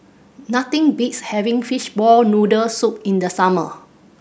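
No technical faults can be heard anywhere in the recording, and the signal holds steady throughout.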